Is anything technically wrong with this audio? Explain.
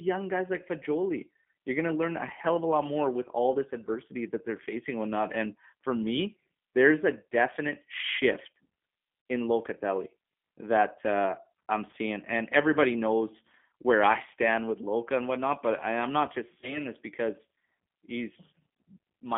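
Yes. Throughout, the G.729 codec squeezes speech into about 150 Hz to 3.5 kHz at 8 kbit/s. Rebuilding it from a filter and sparse pulses makes it audibly rough and synthetic.

VoIP packet loss concealed by the speech codec occurs at 9.22–9.26 s, 11.91–11.94 s after "that uh I'm", and 16.61–16.80 s between "I am not just" and "this because". The decoder stretches its last sound into a fading buzz or coloured noise. The first gap of about 40 ms fits two lost packets, the others one each. The last gap stays distorted well after recovery.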